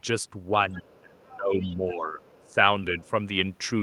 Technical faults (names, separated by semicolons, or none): other side's voice leaking through; speech suppressed in double talk